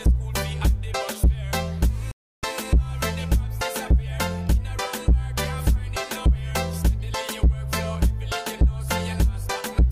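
At about 2.11 s the sound drops out to silence and stays gone until roughly 2.43 s, then picks up exactly where it left off. That's a rebuffering stall: the player ran dry of downloaded audio and simply paused until more showed up. Nothing gets skipped, so there's no jump in the material, but the gap adds about 316 ms to the running time, which you hear as a sudden, dead hole.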